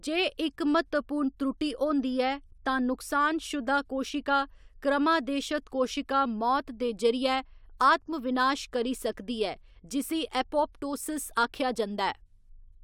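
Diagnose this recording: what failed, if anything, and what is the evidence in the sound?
Nothing failed here as far as I can hear, so there's no stage to point at and no evidence to give.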